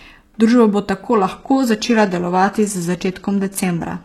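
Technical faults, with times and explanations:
1.14 to 4.05 s, adaptive stream at a lower bitrate. At 1.14 s the speech suddenly loses its top end, with nothing above 12.4 kHz. The treble turns synthetic and codec artefacts rise, with no gap. That fits a slowed connection forcing a lower-bitrate version.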